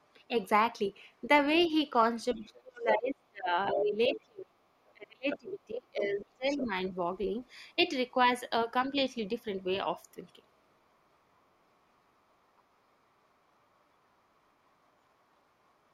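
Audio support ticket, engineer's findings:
Other side's voice leaking through at 0.87–4.21 s (nearly as loud as the talker), 5.3–8.28 s (fainter) and a faint blip at 12.57–12.61 s. Likely the echo canceller leaving loudspeaker pickup in the mic.

Speech suppressed in double talk between 1.68 and 6.94 s: the talker dips in and out, roughly 3 s total, down by as much as about 30 dB. Likely the canceller ducking everything while both sides talk.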